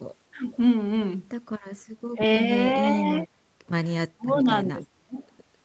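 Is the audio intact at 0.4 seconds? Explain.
No. From 0.32 to 0.42 s the speech is suppressed in double talk: the level dips by about 10 dB, likely because an echo canceller mistook near-end talk overlapping the far-end audio for echo and turned everything down. A waveform shows a brief notch in the envelope.

Right after, from 0.43 to 0.58 s, an echo leak follows: a faint copy of the voice arrives 336 ms late, very quiet at roughly 30 dB below the speech, likely leaking back from a loudspeaker. A spectrogram shows weak, delayed repeats of the harmonic pattern.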